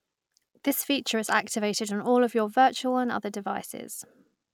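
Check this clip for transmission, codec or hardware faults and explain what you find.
No fault can be heard anywhere in this speech recording. There is nothing to report.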